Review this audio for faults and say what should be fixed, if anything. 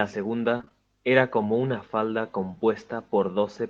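Repeated packet loss (robotic sound) runs from 0.57 to 0.72 s. Several short dropouts, the longest about 20 ms, were each patched by stretching the preceding sound, so nearly half of that 145 ms stretch is concealment, giving a choppy texture with pieces missing. A larger jitter buffer and forward error correction on the network path would prevent this.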